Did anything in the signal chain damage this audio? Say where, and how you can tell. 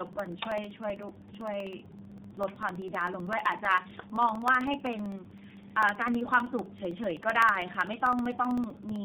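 Yes. Tandem speech coding runs throughout, at the codec stage. The speech is rough, muffled and warbly, with nothing above 3.7 kHz. That points to two low-rate speech codecs in sequence, such as AMR-NB then iLBC with G.711 between, each re-encoding the previous one's damage.

Periodic USB or driver dropouts occur at the driver or buffer stage from 0.07 s to 8.96 s. Every 64 ms, about a millisecond of audio is replaced by silence, roughly 150 times in all. The result is an evenly spaced ticking, audible only while speech is present.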